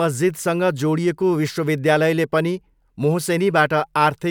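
A short speech recording with nothing technically wrong to point to at any moment. No event or disturbance stands out anywhere in the audio.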